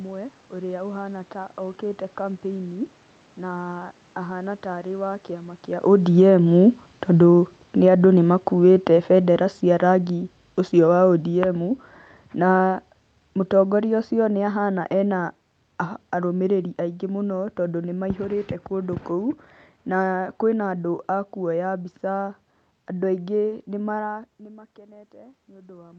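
Speech carried over a call link, with two automatic gain control faults. From "arĩ wa kĩama kĩa" at 5.96 s to "tondũ nĩmaihũrĩte kũndũ kũu" at 17.38 s, automatic gain falling slowly pulls the level down by about 15 dB. The room noise sinks along with the voice, so this is the gain stage reacting to the talker moving around 5.5 s, not the movement itself. From 24.4 s to the end, automatic gain rising lifts voice and background together after the input dropped by about 20 dB when the talker moved away near 24.0 s. The gradual shared swell marks it as gain control.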